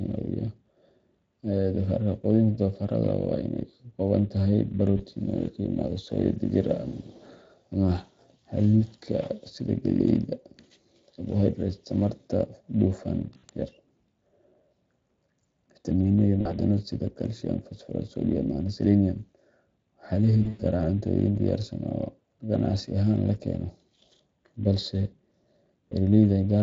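From the start to the end of the speech, the Speex codec leaves a hoarse, grainy, noise-laced texture. Its CELP coding is short of bits for the excitation, so the damage is a noisy, hoarse roughness, not the swirly, smeared artefacts of a music codec. The sound fits a Speex stream around 20 kbps.

VoIP packet loss concealed by the speech codec occurs at 4.97 s (20 ms), 13.37 to 13.44 s (60 ms), 16.41 to 16.57 s (40 ms), 20.43 to 20.62 s (scattered, longest run 100 ms), and 25.9 s (20 ms). Unlike a plain dropout, there is no silent gap. The decoder keeps repeating its last pitch and filter at falling gain, so each hole becomes a stretched buzzy tone or coloured noise that fades. The speech stays weakened briefly afterwards.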